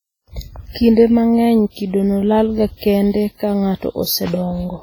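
From start to finish the speech carries a ringing, washy quality, with a hiss that swells and fades along with the voice and quieter detail that seems thinned or missing. The likely cause is heavy WMA compression: the transform encoder smears its quantisation noise across tens of milliseconds around each sound and discards weak spectral lines outright, damage that points to a low bitrate of roughly 24 kbps.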